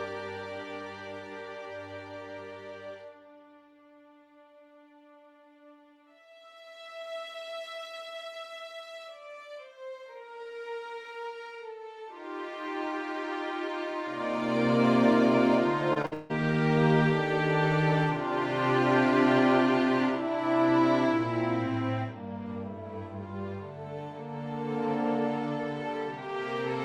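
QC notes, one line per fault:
15.93–16.32 s, repeated packet loss (robotic sound): four gaps in quick succession, the longest 160 ms, together covering about two-thirds of this stretch. Each hole is patched by stretching the preceding sound, so the audio turns choppy, with fragments missing between patches.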